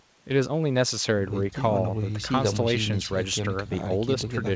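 No technical faults are audible.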